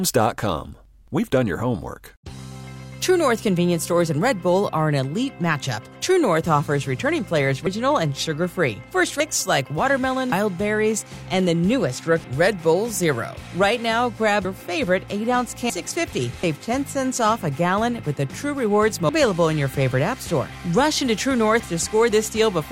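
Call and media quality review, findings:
Compressed frames skipped at 7.66, 9.2, 10.32, 12.24, 14.45, 15.7, 16.43, 19.09 s. Sound jumps ahead roughly 0.2–0.7 s, consistent with dropped 32 ms decoder frames. Spectrogram shows abrupt content jump at each seam.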